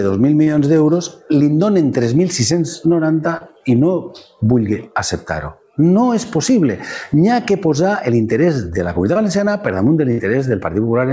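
At 0.44 s, 3.37 s and 9.13 s there is short concealed packet loss. Each time, about 30 ms of audio arrived too late or not at all. The receiver covered the hole by extending the sound just before it, pitched or noise-like as the material required. It then crossfaded back into real audio. The patches run about 20 to 30 ms. Each is heard as a brief smear or wobble, and a short transient inside it can drop out.

At 10.11 s comes a burst of packet loss, lasting until 10.21 s. This time about 60 ms went missing in one run. Concealment stretched the preceding sound for about 65 ms and faded it as the gap lengthened. It sounds like a held buzz or a dying hiss. When the audio returns, the missing stretch is simply gone. All of this sits on a call path with nothing above 8 kHz, which fits G.722 at 64 kbps.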